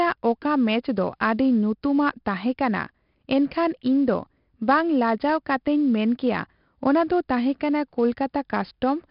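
Speech carries heavy 4-bit ADPCM compression for its whole length. Each sample is coded as a coarse step from a prediction, so a gritty, level-following hiss rides on every loud syllable, and sharp onsets smear where the step size lags. The rate points to a stream of about 44 kbps. On a spectrogram, a noise haze fills the gaps between harmonics during speech, and everything stops at a hard ceiling near 5.3 kHz. The waveform looks grainy on peaks.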